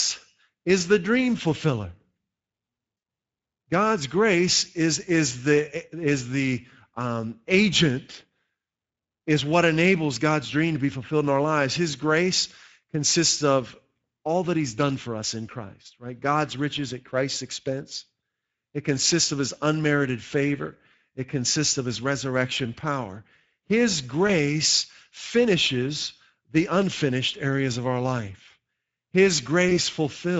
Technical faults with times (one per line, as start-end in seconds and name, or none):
0.00-30.39 Speex codec
2.97-3.03 VoIP packet loss concealed by the speech codec
24.27-24.34 VoIP packet loss concealed by the speech codec
29.69-29.79 VoIP packet loss concealed by the speech codec